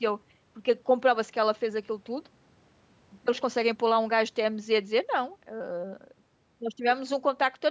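No technical faults are audible.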